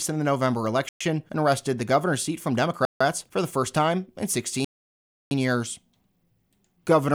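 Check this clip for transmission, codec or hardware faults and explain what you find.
The speech breaks off three times. A Bluetooth stall, at 0.89–1.01 s, 2.85–3.01 s and 4.65–5.31 s, cuts to silence for 0.12, 0.15 and 0.67 s, likely because radio interference delayed packets and starved the headphones' buffer before resumption.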